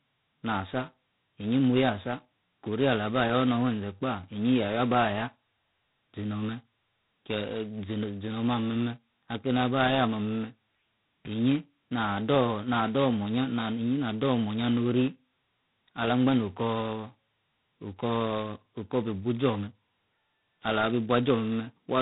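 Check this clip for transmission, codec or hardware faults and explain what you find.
One fault runs throughout: G.726 ADPCM coding, heavily damaged, at what sounds like its 16 kbit/s mode. Very few bits per sample code the difference from an adaptive prediction, so error is large. Nothing above 3.9 kHz survives, and a harsh, rasping hiss tracks the speech level.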